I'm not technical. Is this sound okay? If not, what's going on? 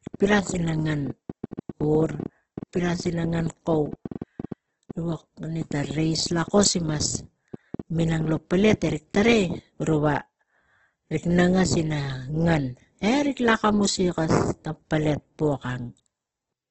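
No. From 0.07 s to 9.16 s there is a train of clicks: about seven similar ticks a second at an uneven pace, roughly 70 in all, audible even in pauses. Because each click has the same shape, it differs from random crackle. Interference from nearby equipment or a faulty connection or power supply is the likely cause.

Throughout, the speech shows heavy Opus compression, likely from a low-rate setting. It sounds grainy and rough instead of swirly like MP3, and nothing is heard above about 8.1 kHz.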